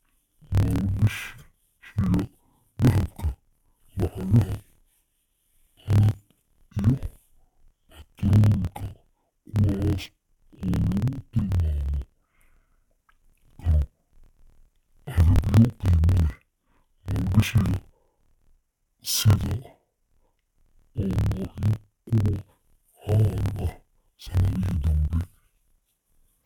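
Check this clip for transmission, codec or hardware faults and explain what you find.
One fault is present, and it affects the entire clip. Interleaved audio read as planar, throughout: each 26.1 ms block of alternating left and right samples is split in half, and each half is played at half speed as its own channel. The speech drops an octave and sounds doubled and choppy, with the chop repeating at the 38.3 Hz block rate.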